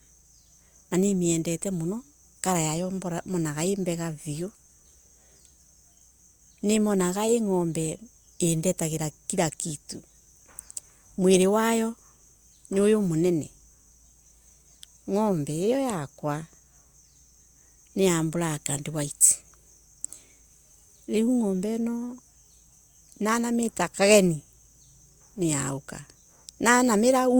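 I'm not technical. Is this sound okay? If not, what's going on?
Yes, there's nothing wrong to hear in this recording.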